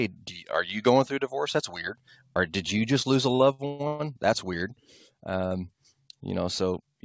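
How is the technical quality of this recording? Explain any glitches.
The recording has one clear glitch: a stretch of stuttering speech, heard through a call-grade channel with no content above 8 kHz, consistent with G.722 at around 64 kbps.

From 3.30 to 4.01 s, just after "you just lose a", the speech drags and hiccups through six short stalls, the longest 126 ms. These are repeated stalls (stutter): late packets kept draining the jitter buffer, so the receiver stretched the last sound to fill roughly half that span. Nothing is lost, but the flow is broken.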